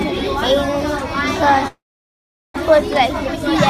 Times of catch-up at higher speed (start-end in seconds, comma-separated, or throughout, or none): none